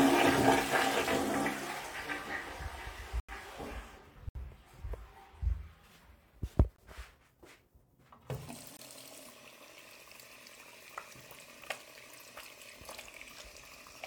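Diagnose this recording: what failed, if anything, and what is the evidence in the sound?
The driver or buffer stage failed, leaving blocks of digital silence at 3.20–3.29 s (85 ms), 4.29–4.35 s (64 ms), 6.76–6.78 s and 8.77–8.79 s (21 ms each). Each drops abruptly to silence and back with no fade, unlike a smoothed network dropout. The 85 ms and 21 ms lengths fit unfilled 4096- and 1024-sample buffers.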